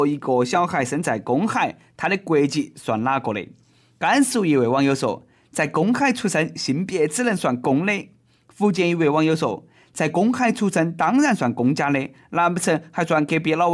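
Nothing technical stands out here: it's a speech recording, and from beginning to end there's nothing wrong to point to.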